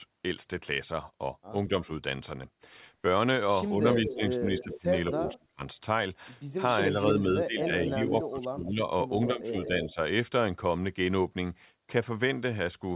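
Speech over a call path that stops at 4 kHz, which fits G.711 mu-law coding. Speech suppressed in double talk occurs from 3.64 to 5.63 s and from 6.9 to 9.97 s. The voice dips in pieces. It drops by around 25 dB in the first span and 15 dB in the second. These dips add up to about one and two seconds. The likely cause is an echo canceller turning everything down while both sides talk. An echo leak is heard at 3.7 to 5.33 s, 6.51 to 8.23 s and 9.26 to 9.93 s. A copy of the voice returns about 215 to 218 ms late. It sits roughly 10 dB below the speech, and nearer 15 dB below in the last span. The loudspeaker side's canceller likely let it through.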